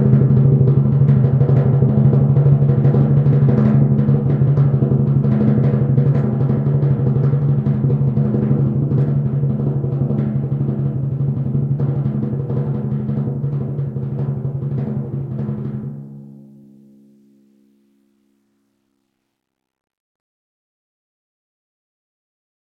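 Music, with no technical fault to point to anywhere in the recording. Nothing in it calls for a time stamp or a cause.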